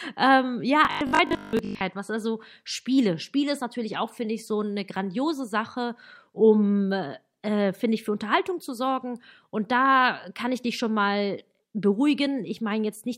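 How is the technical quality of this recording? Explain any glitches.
The recording has one clear fault: robotic sound from repeated short buffers, from 0.85 to 1.83 s, just before "was also". The speech collapses into a rigid, metallic 50 Hz buzz that only loosely tracks the words. This is likely a 20 ms chunk being replayed while most of the real audio is skipped.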